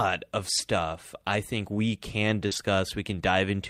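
Around 0.57 to 0.59 s there's a lost packet rebuilt from error correction: a 20 ms stretch played from the low-bitrate backup copy carried in the next packet, so there's no gap, just a moment where the speech turns rougher and noisier.

At 2.47 to 2.53 s a short concealed packet loss comes in: about 40 ms never arrived, so the decoder extended the last sound to cover it. You hear a brief smear or wobble, and a short consonant in there could vanish.

Right on its heels, from 2.51 to 2.57 s, another 40 ms gets rebuilt from error correction, which fits two lost packets. It's that same coarse, noisy patch as the decoder plays the backup copies before settling back into the real audio.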